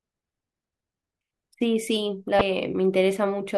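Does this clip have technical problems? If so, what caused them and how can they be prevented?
Yes. A brief glitch interrupts the speech from 2.38 to 2.41 s, the sign of damaged data in a compressed stream: corrupted bytes left the decoder unable to read those frames, so it lost sync until the next valid frame header. Prevent it by storing and transmitting compressed audio with checksums or error correction and verifying files after transfer.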